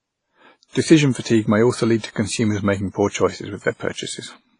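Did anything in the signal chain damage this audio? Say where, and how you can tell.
Yes, at the codec stage, and throughout the speech. The damage is heavy: the speech turns washy and smeared, there is a ringing haze around each syllable, and the hiss swells and shrinks with the level of the voice. Nothing is present above 10.4 kHz. The likely cause is WMA compression at a low rate, which fits about 24 kbps. Long transform blocks spread the quantisation noise over tens of milliseconds, and weak spectral lines are zeroed. A plain low-pass filter would cut the top cleanly without that breathing, signal-dependent noise.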